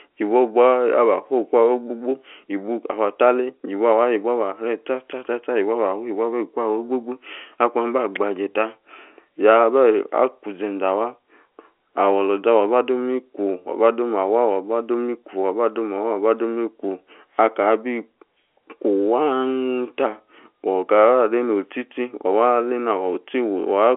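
Listening through this speech recording, nothing stood out as a technical problem.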